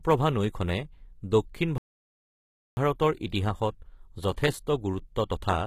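From the start, the speech carries HE-AAC compression artefacts, likely from a low bitrate around 20 kbps. The rebuilt treble sounds gritty and metallic. At 1.78 s, right after "নৈখনে দক্ষিণ", a playback stall cuts the sound to silence for about 0.99 s, likely because the player ran out of data. It resumes at 2.77 s.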